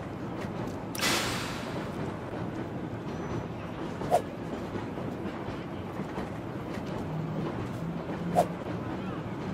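A single sharp click sits at 7.02 s in the audio, heard as a brief tick with a thin vertical line running across the whole spectrum at that instant. It is most likely dropped samples: a fraction of a millisecond of the stream went missing, so the waveform jumps straight from one value to a later one. The gap is far too short to remove any audible sound; what remains is the discontinuity itself, which registers as the click.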